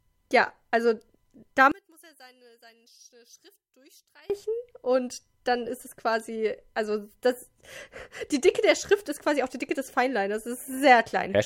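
A speech clip where, from 1.72 to 4.30 s, the voice drops about 27 dB and turns faint, recovering just before "und dann ist es". That's likely one channel inverted, so the centred voice cancels when the two channels are summed to mono.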